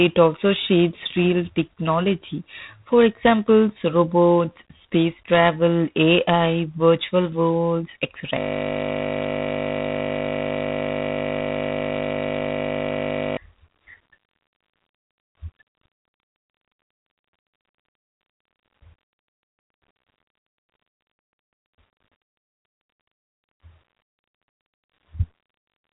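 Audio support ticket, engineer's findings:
Harsh, rasping hiss riding on the speech throughout, rising and falling with its level; nothing above 3.8 kHz. G.726 ADPCM telephone-band coding. Coarse quantisation of sample-to-prediction differences, plainly audible, which fits the 24 kbit/s mode. Each bit dropped per sample adds noise that tracks the signal.

Steady 50 Hz buzz, 8.40 s to 13.37 s, speech replaced by it. System hang loop. Driver or host stalled while the audio hardware kept replaying one 20 ms ring-buffer slice, repeated exactly for roughly 5 s until recovery.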